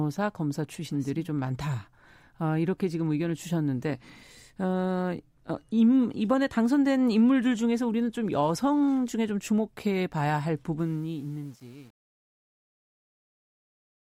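From 10.79 s to the end at 14.03 s, the speech fade-out shows truncation distortion on the fade. The level stage keeps about 8 bits without dither, so from 11.1 s the tail turns gritty. The waveform shows stair-stepped blocks, and the spectrogram shows broadband hash.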